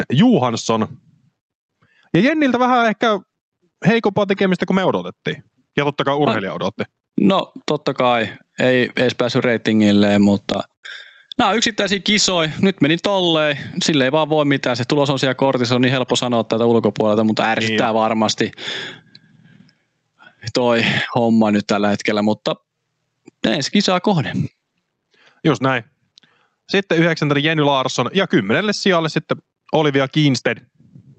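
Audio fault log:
Throughout: gain pumping. The level swings by something like 15 dB. That's likely a mic gain set far too hot, with a fast limiter or compressor clamping down on each loud syllable and then letting go. Loud and quiet parts end up squeezed together, and it all sounds crushed. The call codec's top end stops around 8 kHz.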